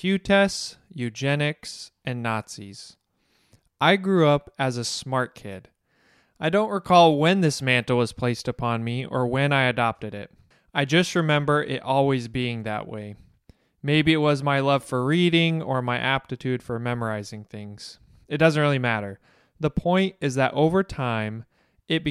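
No technical faults are audible anywhere in the recording.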